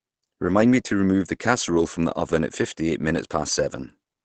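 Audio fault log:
Throughout: Opus compression, heavy. The speech sounds muffled and hoarse, with nothing above 8.8 kHz. This most likely comes from Opus running in its speech (SILK) mode at a low bitrate, which fits around 12 kbps. That mode models the voice coarsely and limits the bandwidth. On a spectrogram the content stops at a flat ceiling near 8.8 kHz, with smeared, noisy harmonics below it.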